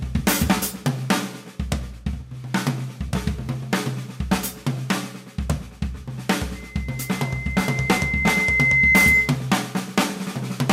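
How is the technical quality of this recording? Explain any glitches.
The recording is marred by one clear fault. From 6.55 to 9.40 s, loudspeaker feedback squeal: the microphone re-amplifies its own loudspeaker until a 2.1 kHz tone swells over roughly two seconds to about 10 dB above the sound, showing as a bright horizontal spectrogram line.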